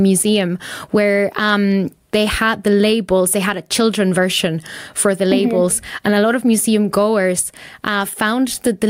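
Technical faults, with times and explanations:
Throughout, gain pumping: the input gain is likely set far too high for the microphone, so a fast limiter or compressor keeps clamping down whenever the speech gets loud, swinging the level by roughly 15 dB. Loud and quiet passages are pressed close together in level and the speech sounds squashed.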